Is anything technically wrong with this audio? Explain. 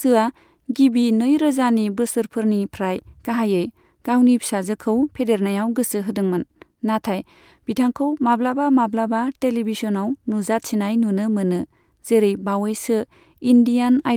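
No, nothing is technically wrong with this audio.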